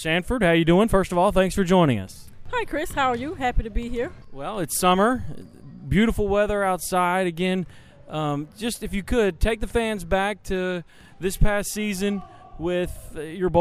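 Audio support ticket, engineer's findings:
No audio faults found on this ticket.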